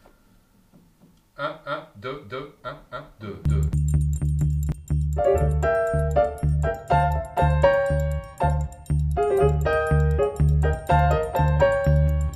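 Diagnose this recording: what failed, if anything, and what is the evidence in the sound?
A doubled audio track runs from the start to 4.72 s. Every onset repeats about 0.3 s later at roughly equal level, full-band and dry, then stops abruptly. A spectrogram shows each event twice, horizontally offset. The likely cause is a second, slower capture path or a misaligned edit.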